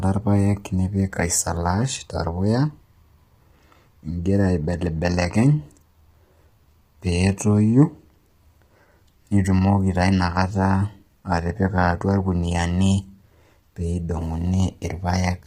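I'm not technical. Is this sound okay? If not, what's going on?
No. The speech sounds rough and grainy throughout, with a thin, artificial top end, likely from heavy low-delay AAC compression of the kind used on video calls.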